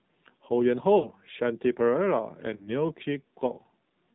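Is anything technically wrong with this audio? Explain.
Yes. The AMR narrowband mobile codec runs throughout the speech: it samples at 8 kHz and rebuilds the voice from a vocal-tract model excited by a few pulses, so nothing above 4 kHz survives. The plainly buzzy, synthetic texture fits a low mode near 7.4 kbps.

Lost AMR speech frames occur at 0.99 to 1.09 s and at 2.56 to 2.69 s. Each gap covers about 40 ms, consistent with two 20 ms frames. The decoder repeated the last good pitch and filter settings at falling gain, so the speech briefly smears and dips before recovering somewhat rough.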